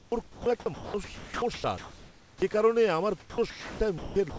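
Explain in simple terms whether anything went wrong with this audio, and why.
Sound chopped by the voice detector, from 0.00 to 2.54 s and again from 3.20 to 4.38 s, just before and just after "কারণে আমার". The sender likely switched transmission on and off repeatedly, so 1.76 s and then 0.74 s of quiet speech were replaced with fake background hiss, making the speech choppy.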